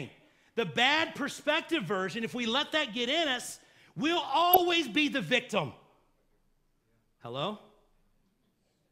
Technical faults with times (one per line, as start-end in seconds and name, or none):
4.52-4.57 DAB burbling